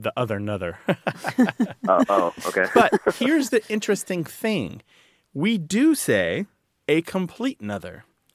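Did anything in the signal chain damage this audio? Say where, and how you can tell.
No, nothing audible in this speech recording points to damage at any stage of the signal chain.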